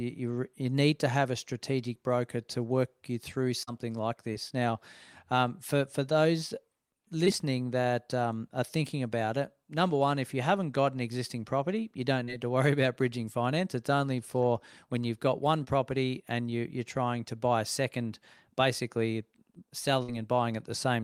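Short concealed packet loss hits at 3.63, 4.33, 7.25, 12.24 and 15.64 s: 20 to 40 ms of audio never arrived in time, so the receiver stretched the last sound over the gap, leaving brief smears or wobbles. Then a burst of packet loss at 20.02 to 20.10 s drops about 60 ms, patched with a fading continuation before the speech picks up further along.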